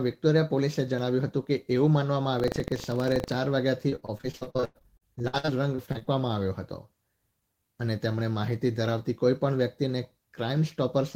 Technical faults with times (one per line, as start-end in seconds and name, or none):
2.36-3.33 buffer tearing
3.89-6.09 repeated packet loss (robotic sound)